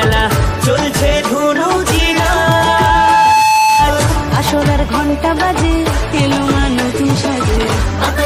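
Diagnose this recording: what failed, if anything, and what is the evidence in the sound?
What you've got here is loudspeaker feedback squeal, so the failure sits on the analogue side, in the acoustic loop between microphone and speaker rather than anywhere digital. From 1.96 s a single tone around 869 Hz swells up over about a second and a half, peaks at about 5 dB above the rest of the sound, and runs until 4.05 s. At that one frequency the mic-to-speaker loop gain tipped past unity, so the tone fed itself.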